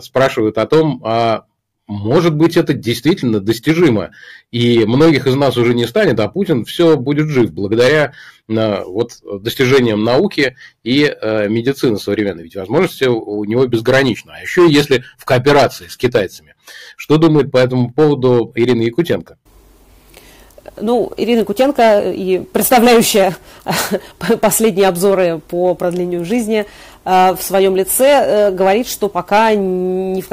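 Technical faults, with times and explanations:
Throughout: hard clipping, peaks driven about 10 dB past full scale and cut flat on a few percent of samples, adding harsh high harmonics.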